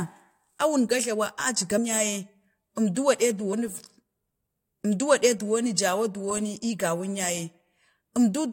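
At 1.77 s, just before "ya ye", compressed frames are skipped. Roughly four frames are lost, about a tenth of a second of speech. At 3.52 s, about two more frames are lost. The jumps fit 21.3 ms frames. At each join the speech jumps ahead.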